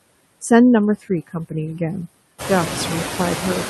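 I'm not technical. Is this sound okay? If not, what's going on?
No. The background noise drops away between words and creeps back under them throughout. These are noise suppressor artifacts: a cleanup stage keeps turning the noise down, and that dipping is what it leaves behind. Just after 2.5 s the room gets noisier, which makes the effect easier to hear.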